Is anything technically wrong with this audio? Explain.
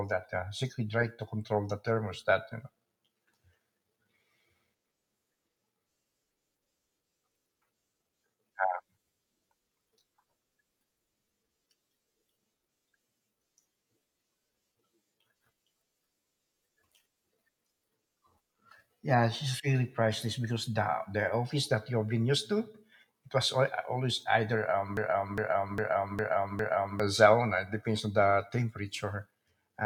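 Yes, there's a broken-record loop near the end. Right after "always either a", from about 24.97 to 27.0 s, a 0.41 s slice of speech plays five times back to back, identical each time, so it stutters like a stuck CD. That's likely a stall in the player, encoder or stream, where it kept resending the last chunk it had buffered. Whatever speech belonged in those two seconds is gone.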